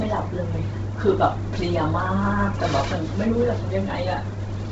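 Speech with heavy Bluetooth LC3 compression throughout, likely causing its grainy, breathy edge; a spectrogram shows nothing above 7.8 kHz and noise-filled upper bands.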